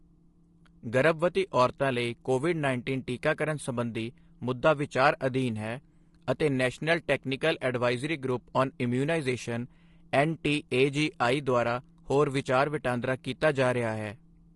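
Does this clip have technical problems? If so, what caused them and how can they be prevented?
Yes. The speech is rough and grainy for the whole clip, with noise filling the gaps between the pitch harmonics and a top band that sounds thinned and somewhat synthetic. The likely cause is low-delay AAC compression (AAC-ELD). Its short frames resolve voice harmonics poorly and spend bits quickly, and the damage here fits a bitrate around 32 kbps. To prevent it, raise the call bitrate or switch to a longer-frame codec mode when low delay isn't essential.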